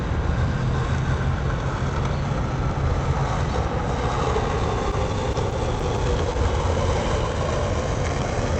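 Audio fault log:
4.92–6.38 s, scattered short gaps: the sound picks up about seven brief ticks and tiny smears, each no longer than roughly 10 ms, spread across this stretch while the audio stays clear between them. Packets went missing or arrived late here and there, and the receiver filled each small hole by carrying the last sound forward, around 70 ms in all, so a few percent of the span is patched, heard over a call path whose upper range stops near 8 kHz.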